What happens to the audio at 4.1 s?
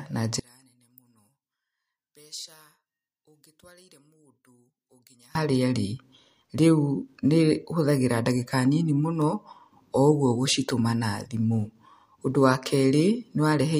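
At 4.1 s the speech is nearly gone, about 28 dB down, leaving a faint trace. This runs from 0.40 to 5.35 s. The likely cause is one channel inverted. The flipped polarity makes the matching centre content cancel when both channels sum to mono.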